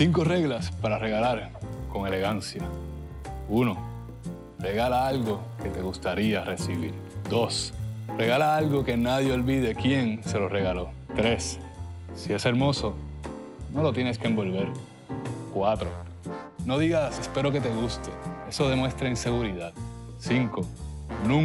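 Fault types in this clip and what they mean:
Resampler restarted on every block: the 24 kHz to 48 kHz conversion was run on each 10 ms block in isolation, so the filter had no real neighbouring samples at the block edges and left a small discontinuity at each one. With blocks this short the edge errors merge into a 100 Hz buzz, heard from 1.67 s to 9.67 s. It rides on the sound and drops away in gaps where there is no signal.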